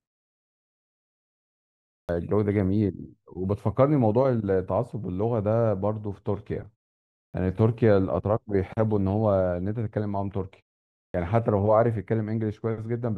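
At 2.04, 7.29 and 11.1 s the speech jumps in abruptly, its opening sounds missing: about 48, 48 and 42 ms are swallowed. This is clipped start after a pause: the output device dozes during each preceding silence and wakes too late.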